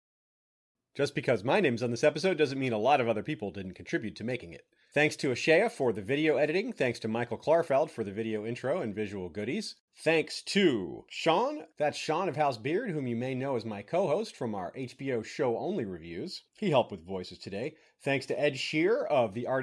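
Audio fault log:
No faults heard anywhere in this speech recording.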